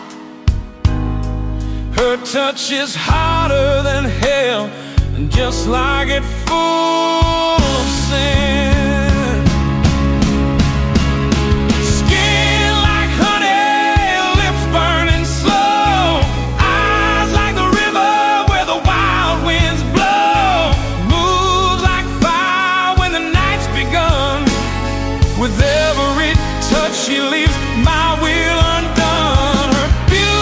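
No technical faults occur at any point in the audio, so there is nothing to describe in time order.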